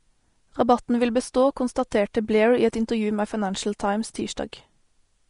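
From start to finish the speech sounds hissy and grainy, with a dull top end that stops dead at about 10.6 kHz and consonants that blur at their onsets. This is likely Vorbis compression at a low setting, consistent with a bitrate near 36 kbps. The codec has cut the treble at that limit and quantised the remaining upper detail so coarsely that it turns into noise of similar energy. The grain is plainly audible.

At 1.91 s a sharp attack arrives behind a short burst of hiss about 10 ms long and sounds softened and smeared. This is pre-echo. The attack sits late in a transform block, and the quantisation noise, scaled for the loud attack, spreads evenly across the whole block. That noise fills the quiet moment just before the onset, where nothing masks it.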